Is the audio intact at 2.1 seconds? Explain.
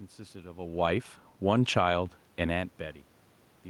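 No. From 1.84 to 2.24 s, automatic gain rising lifts voice and room noise together by about 4 dB after the input dropped about 17 dB.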